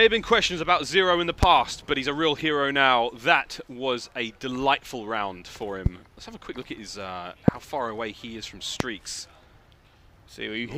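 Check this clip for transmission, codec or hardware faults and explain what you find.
Four loud pops interrupt the clip, each lasting roughly 25 ms: at 1.43 to 1.45 s, 5.86 to 5.89 s, 7.48 to 7.51 s and 8.80 to 8.83 s. Each is a single sharp crack standing well above the sound, by very roughly 15 to 25 dB, while the sound continues beneath it. A brief voltage spike, likely from static or a connector or switch glitch, was added to the signal. On a waveform each appears as a tall narrow spike; on a spectrogram, as a thin bright vertical stripe spanning all frequencies.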